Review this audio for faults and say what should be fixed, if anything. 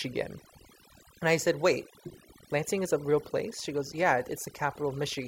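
The whole speech clip suffers from overdone noise removal. The denoiser was pushed hard enough that it's cutting individual frequency bands whenever they sit close to its noise estimate, so the background in the gaps drops and breaks up into little twinkling specks, and the voice's quieter detail got stripped too. Next time, back the reduction amount off and audition the processed result against the original before committing.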